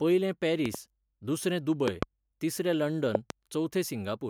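Loud pops at 0.66–0.77 s, 1.88–2.05 s and 3.15–3.32 s, each a quick double thump standing roughly 10 dB, then 20 dB, above the speech, which continues underneath. Likely cause: a sudden voltage step from a switch, plug or static discharge entering the signal path.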